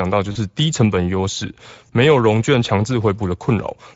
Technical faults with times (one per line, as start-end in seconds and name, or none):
0.00-3.96 Speex codec
0.31-0.37 VoIP packet loss concealed by the speech codec
1.87-1.91 VoIP packet loss concealed by the speech codec